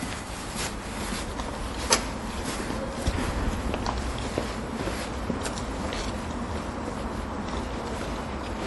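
From start to end, the sound has a hard ceiling near 11.5 kHz. Nothing sits above it. Quiet detail flickers in and out, giving a watery, swirly texture. This is likely MP3 compression, and the damage fits a low bitrate around 48 kbps.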